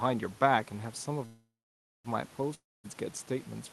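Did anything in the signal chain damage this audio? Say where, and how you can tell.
Yes, a call audio freeze from 1.25 to 2.06 s: the last sound decays to silence, then speech resumes intact and later, likely from packets delayed at the jitter buffer.

A long network dropout from 2.54 to 2.86 s: the sound fades into about 0.21 s of silence, then returns with roughly 300 ms gone, likely as packets never arrived.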